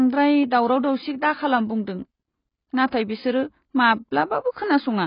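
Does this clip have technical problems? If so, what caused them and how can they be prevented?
Yes. Throughout, the speech stops sharply above 5.1 kHz and warbles, likely from heavy AAC compression near 16 kbps; a plain low-pass filter would dull it without warbling. Encode at a higher bitrate.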